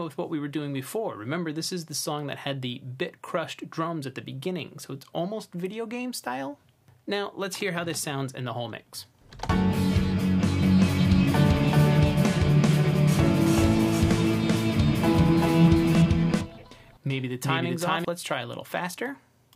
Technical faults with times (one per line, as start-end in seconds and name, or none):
10.63-18.05 doubled audio track